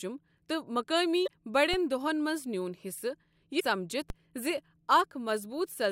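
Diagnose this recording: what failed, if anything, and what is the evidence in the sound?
Damaged data in the compressed stream, at the codec or storage stage, shows up as two short glitches, from 1.24 to 1.28 s and from 3.57 to 3.62 s. Each lasts about 40 to 50 ms. There the decoder met corrupted frames, lost sync and hunted for the next valid header, so the speech is briefly disrupted.

A DC step, from the converter or analogue input, appears at 1.74 s, just before "دۄہن منٛز نیون", and again at 4.10 s. Each is a low thump or click while the speech carries on undisturbed. The waveform's zero line jumped to a new offset, and a high-pass filter near 20 Hz then bled it away as a decay. Unlike the codec damage, nothing in the speech itself is garbled or skipped; only the baseline moves.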